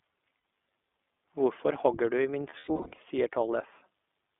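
The speech sounds thin and slightly rough, with a faintly synthetic edge. Everything below about 250 Hz and above about 3.5 kHz is missing, so consonants lack crispness. This is the iLBC codec, a narrowband VoIP coder that encodes each short frame's excitation independently. Its plainly audible coarseness fits 20 ms frames at a rate near 15 kbps.

At 0.38 s comes the first burst of lost iLBC frames, about 60 ms. Here the sound briefly freezes into a held, faintly buzzy tone before clean speech resumes.

Between 2.50 and 2.99 s, the losses return as a scattered cluster totalling 300 ms over 480 ms. The longest gap is around a tenth of a second. Each gap becomes a breathy, sustained vowel-like smear that fades as it lengthens. The decoder repeats the last pitch cycle mixed with noise to fill the missing packets. Because every frame decodes on its own, the speech snaps back right after each gap.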